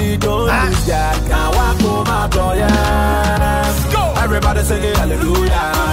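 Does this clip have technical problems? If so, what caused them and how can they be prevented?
No, this clip has no technical problems, so there is nothing to trace to a cause or to prevent.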